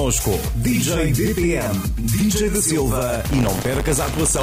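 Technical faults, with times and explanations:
3.24 s to the end, buffer tearing: a steady robotic buzz at 100 Hz rides on the sound from here on, a rattling edge present only where there is signal. The writer and the hardware reader of the ring buffer have drifted so they cross inside each period, which fits a 10 ms buffer. A small slice of every period, around 7%, holds audio roughly 40 ms old, and the hard joins either side repeat at the buffer rate.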